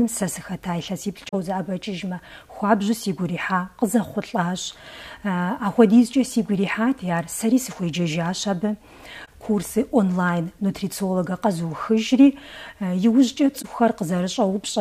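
At 1.29 s there is a short fault, about 52 ms long. It is a corrupt frame concealed. Damaged data in the encoded stream was caught by the decoder, which filled the gap itself. The span fits two frames. The same happens at 9.25 s for about 68 ms, which fits three frames. Again at 13.59 s for about 58 ms.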